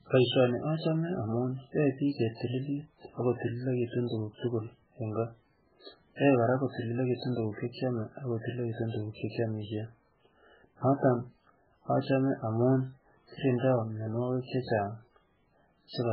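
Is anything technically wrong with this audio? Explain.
Yes. Throughout the speech, heavy MP3 compression is likely: nothing above 5.3 kHz, and weak frequency lines flicker between frames, giving a watery, swirly sound with smeared consonants. A spectrogram shows a flat ceiling and speckled gaps, which fits a very low bitrate near 8 kbps.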